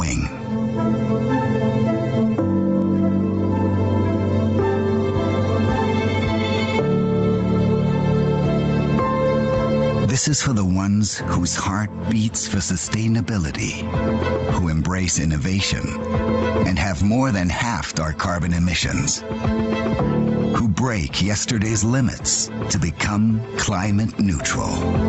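Gain pumping throughout: likely excessive input gain clamped by a fast limiter, so the gain swings around 10 dB under loud sounds.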